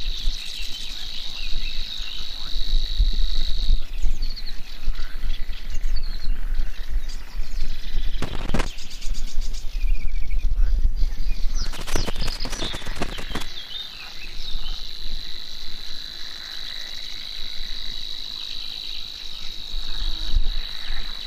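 Irregular bursts of crackle and scratching chop the audio from 8.22 to 8.66 s and from 11.66 to 13.45 s: loose connector crackle, from a worn contact making and breaking.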